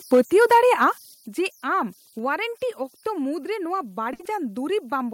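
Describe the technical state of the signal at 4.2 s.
At 4.2 s you're right inside a burst of packet loss, running from about 4.13 to 4.21 s. A short run of audio never arrived in time, so the receiver papered over roughly 60 ms by stretching the last bit of speech it had and fading it down, which comes across as a brief held buzz or a dying hiss. Then it jumps ahead, and about 60 ms of the speech is simply gone.

Underneath that, and all through the clip, there are converter idle tones. The delta-sigma converter wasn't dithered, so at low levels it locks into repeating bit patterns that produce a faint whistle somewhere around 5 kHz, sitting about 33 dB below the speech. It's most obvious in the quiet moments and adds a grainy edge to the softer sounds.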